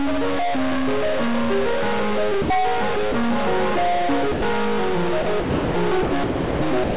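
Stuck-bit distortion runs through this music clip, heard as a distortion on everything and a hiss that fills the quieter moments. A data bit is likely frozen at 0 or 1, so about half the samples are off by that bit's weight, following the waveform's shape and sign. Sound dropped by the voice detector cuts the music and replaces it with steady comfort noise at 2.42–2.50, 3.12–3.14, 4.32–4.42, 5.22–5.26, 5.40–5.74, 6.02–6.12, 6.24–6.62 and 6.84 s to the end, with the longest gaps near 0.34 and 0.38 s. The sender's detector likely mistook the music for background and stopped transmitting until it triggered again. Nothing is heard above 4 kHz, which fits the narrowband telephone coding of the call path.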